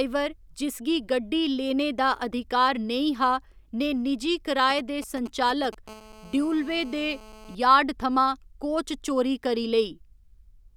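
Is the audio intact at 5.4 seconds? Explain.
No, not quite. From about 4.70 to 5.75 s there's GSM signalling interference running under the speech. A 2G phone close by is sending short groups of radio bursts while it signals the network, and the audio circuitry rectifies that RF into audible clicks. You get that galloping dit-dit-dit of brief buzzes at a 217 Hz repeat rate, sitting roughly 15 dB below the speech, so 5.4 s falls right in the middle of it.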